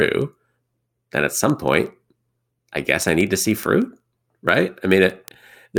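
A speech recording carries a steady rattle of sharp, uneven ticks from 0.16 s to 5.77 s, roughly every 70 ms, about a hundred in all. These are word clock ticks: the receiving device ran on its own clock rather than locking to the digital link's sender, with the two clocks drifting apart by roughly 300 ppm. At each slip a single sample was dropped or repeated, and the misread samples around it produce the clicks.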